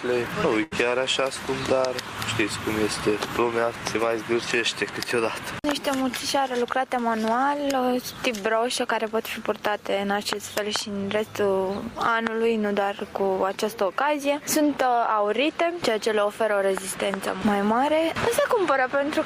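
At 0.63 s the sound smears into a briefly held, fading continuation of the last sound for about 78 ms before jumping ahead at 0.73 s, with roughly 80 ms of audio simply gone. This is a burst of packet loss: consecutive packets never arrived in time, so the receiver stretched and faded the last audio until the stream resumed.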